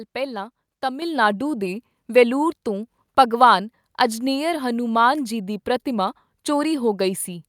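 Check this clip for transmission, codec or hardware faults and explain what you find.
There is one fault, a microphone volume stepped up at 1.02 s, just before "ਨਾਡੂ ਦੇ ਵੈਲੂਰ ਤੋਂ". The call software judged the input too quiet and raised the microphone's input gain in a single step of about 7 dB, so the speech and the background noise jump louder together and stay there.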